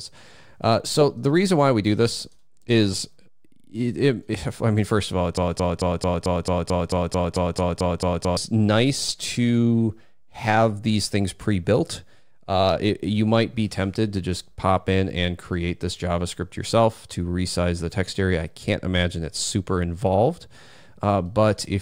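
From 5.37 to 8.37 s there's a broken-record loop: a 0.22 s fragment repeats exactly fourteen times, likely a stalled player replaying its last chunk, and the audio underneath is lost.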